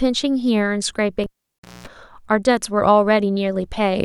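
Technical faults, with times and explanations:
1.24 to 1.87 s, cable pulled and plugged in: A pop marks the moment the live lead comes out. The sound then drops to near silence for about 538 ms. As the plug goes back, only its tip touches at first, so a 60 Hz mains buzz bursts through for about 213 ms. There is no proper ground or signal contact yet. A second pop follows as full contact returns and the speech comes back.
1.59 s, gap at a join of encoded pieces: A silence of about 48 ms opens here, with abrupt edges smeared by the codec. It falls inside the cable disturbance. Two separately encoded pieces were joined without trimming. The encoder's start-up delay and the padded final frame both stayed in as dead air. Then the audio resumes where it stopped. It repeats every 4 s, so this clip holds just this one.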